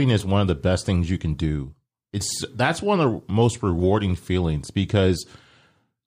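Nothing in the speech recording points to a technical fault; the signal stays continuous and undisturbed throughout.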